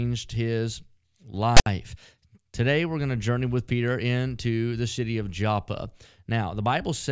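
File tags played as audio at 1.57 to 1.66 s: a block of text metadata has been decoded as though it were samples, giving about 96 ms of loud, lopsided rasp with hard edges, with silence where its zero padding falls.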